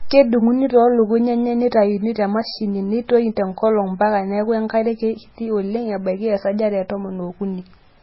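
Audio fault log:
Throughout, MP3 compression: the speech has nothing above 5.6 kHz and a heavily watery, swirling texture, likely from a bit-starved encoder, which fits a bitrate near 16 kbps; it chops the treble at a fixed point and weak frequency lines flicker between frames.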